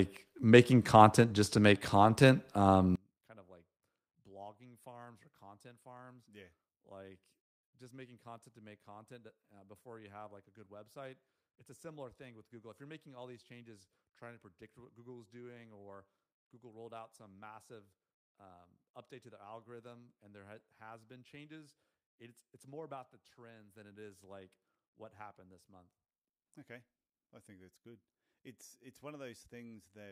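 From 2.96 s to the end, the speech collapses to a faint trace when heard in mono. The level falls by about 32 dB. Centred sound and low end nearly disappear. What remains is a residue of the small differences between the two sides. The likely cause is one channel inverted. With reversed polarity on one side, the shared centre content cancels when the channels are summed.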